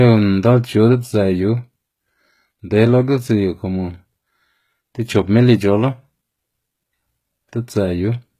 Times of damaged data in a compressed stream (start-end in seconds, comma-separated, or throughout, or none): none